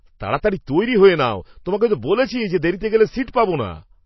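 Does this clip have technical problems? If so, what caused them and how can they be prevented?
Yes. The whole clip has a watery, swirly quality, and nothing reaches above 5.8 kHz, so the speech sounds dull and the s sounds lose their bite. That's likely MP3 compression starved of bits, which fits a rate around 24 kbps. The encoder cuts off the treble and drops quieter detail that flickers from frame to frame. To avoid it, encode at a much higher bitrate, 128 kbps or more, or keep a lossless copy for anything that matters.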